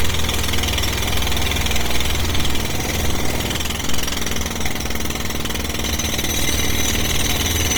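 A recording of everyday sound with likely Bluetooth LC3 compression throughout: a grainy, breathy upper band. A spectrogram shows patchy noise-filled highs in 10 ms blocks, pointing to roughly 32 kbps, cut off above 20.2 kHz.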